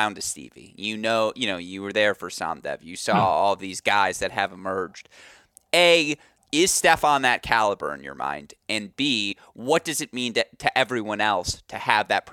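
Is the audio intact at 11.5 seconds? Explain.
No. Just after "mean to to everyone", from 11.52 to 11.54 s, damaged data in a compressed stream makes the decoder misread corrupt frames and lose sync, producing a brief glitch. The waveform shows an abrupt discontinuity.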